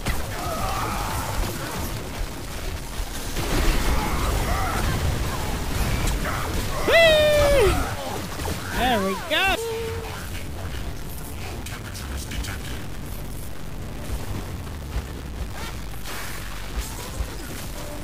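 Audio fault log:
throughout, stuck bit: A harsh, buzzy distortion sits on all of the sound. Quiet gaps fill with gritty noise instead of going silent. The likely cause is one data bit held fixed, adding errors near -30 dBFS wherever that bit should differ.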